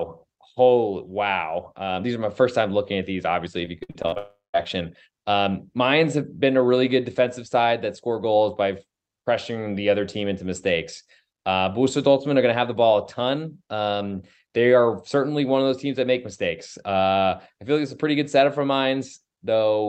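Just after "looking at these obviously", from 3.65 to 4.18 s, the speech turns choppy and metallic: this is repeated packet loss (robotic sound). A run of short gaps, the longest about 58 ms, keeps interrupting the signal. Each one is patched by stretching the last sound, so roughly 39% of that half-second is synthetic fill. Real speech still surfaces between the gaps, which is what separates this from a single dropout.

From 4.18 to 4.56 s there is one continuous hole of about 360 ms, which sounds like a long network dropout. The concealment first carries the last sound on as a fading buzz, then gives way to about 160 ms of silence before speech resumes with the lost part simply gone. Unlike the stuttering before it, no real audio gets through anywhere in this stretch. The cause is likely a stall in the network rather than scattered packet loss. Throughout, the Opus call path limits the audio band to about 8 kHz.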